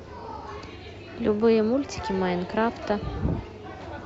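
No audible technical faults in this recording.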